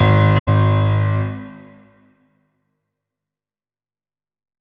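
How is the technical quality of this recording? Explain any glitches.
There's one glitch, early on. From 0.37 to 0.48 s there's a corrupt frame concealed by the decoder: it spotted damaged AAC data and patched over it, muting or reusing scrambled recent spectrum. The patched stretch lasts about 110 ms, spanning a few frames.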